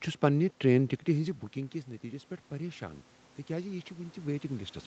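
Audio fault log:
1.13–4.86 s, automatic gain rising: Just after "چھس پننہ ٹرین ٹکٹِہ", the input level drops by about 15 dB as the talker moves back from the microphone near 1 s. The automatic gain control responds by raising its gain gradually until the clip ends, so the speech slowly swells back up. What distinguishes this from the talker simply moving closer is that the room noise swells along with the voice, rising at the same slow rate.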